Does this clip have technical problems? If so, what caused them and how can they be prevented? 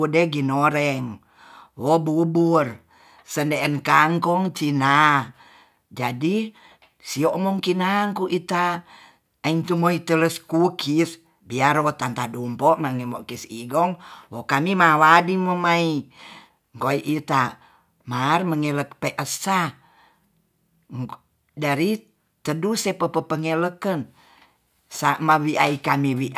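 No, there are no technical faults to point to in this speech recording. With nothing gone wrong, there is no cause to trace and nothing that needs preventing.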